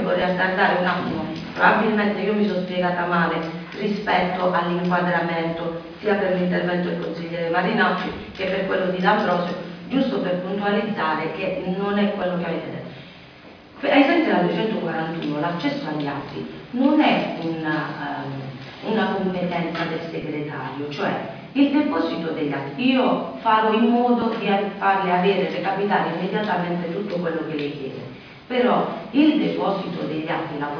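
Nothing in the audio stood out as a technical problem on listening.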